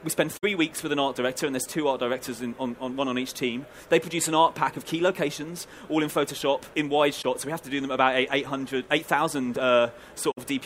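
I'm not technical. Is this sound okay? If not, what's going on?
No. This is AAC frame loss with muting: small chunks of the compressed audio went missing, and the player filled them with silence. You hear brief soft-edged gaps, about 64 ms at 0.37–0.44 s and 10.31–10.38 s, and about 21 ms at 7.22–7.24 s.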